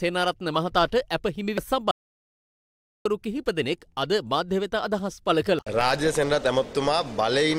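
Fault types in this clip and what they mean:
Compressed frames skipped: whole chunks of the coded audio never got played, so the sound hops forward. At 1.58 s about two frames go, roughly 150 ms, and at 5.59 s about one, around 100 ms. That fits frames of 85.3 ms.
Audio dropout to silence: from 1.91 s to 3.05 s the sound just stops for 1.14 s, into dead digital silence with no room tone, then cuts back in mid-flow. That's most likely lost input while the recorder kept writing silence.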